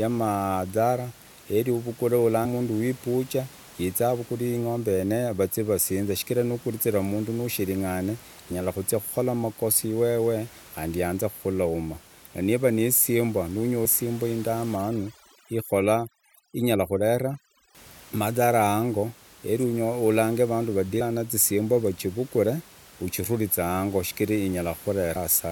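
At 2.44 s the speech jumps forward. Compressed frames were skipped: whole blocks of coded audio were never played, because they were missing or the decoder rejected them as damaged. About a fifth of a second is gone. The join is a short smeared blip, not a sharp click, because neighbouring frames overlap. The same skip returns at 13.84 s, losing roughly 300 ms. The gaps fit a frame length of about 23.2 ms.

From 14.76 s to 17.75 s there is overdone noise removal. The room noise normally sits about 24 dB below the speech. Here a noise reducer set too hard shuts off frequency bands that come close to its noise estimate. The background drops and breaks up into small twinkling specks. Quiet parts of the speech are cut along with the noise.

Two shorter frame skips follow. At 21.0 s about 70 ms is lost, and at 25.15 s about 100 ms. Each one is a brief smeared jump.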